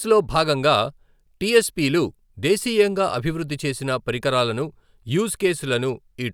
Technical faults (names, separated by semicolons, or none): none